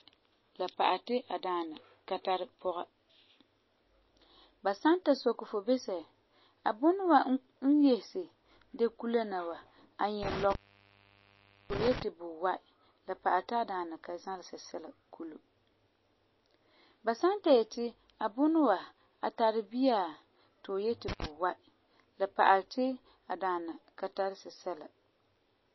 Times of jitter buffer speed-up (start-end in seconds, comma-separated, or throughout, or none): none